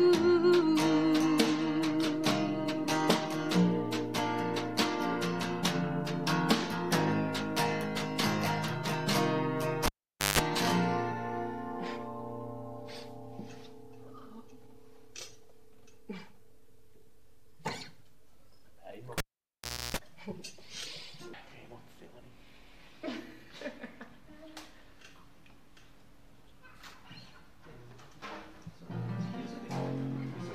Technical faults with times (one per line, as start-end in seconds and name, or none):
9.86-10.39 cable pulled and plugged in
19.18-19.97 cable pulled and plugged in